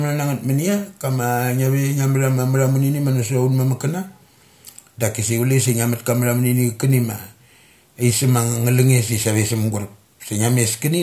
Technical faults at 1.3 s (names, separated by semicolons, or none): none